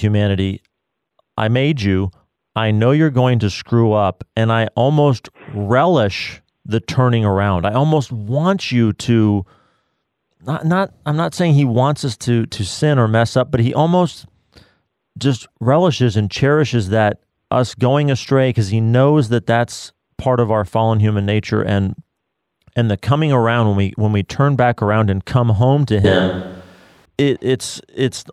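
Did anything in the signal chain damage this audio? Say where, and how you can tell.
Yes. From 26.05 s to 27.05 s, right after "and come home to", the sound abruptly turns roomy and hollow with thinner bass, then snaps back. This is a switch to a distant microphone at the capture stage, likely the close microphone's signal dropping out so a farther one carried the speech. Level barely changes, but room noise rises to roughly 35 dB below the speech. A spectrogram shows weakened low frequencies, smeared reverberant tails and a raised floor between syllables. The waveform shows longer decays.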